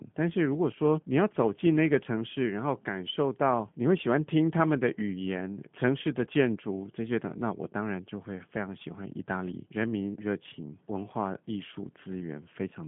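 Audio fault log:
throughout, G.729 codec: the speech has passed through a low-rate CELP voice codec, consistent with G.729A at 8 kbit/s, which rebuilds each frame from a vocal tract filter, a pitch predictor and a few pulses. The line band runs from 150 Hz to 3.4 kHz, nothing sounds above 3.6 kHz, and the voice carries plainly audible rough, synthetic coding damage.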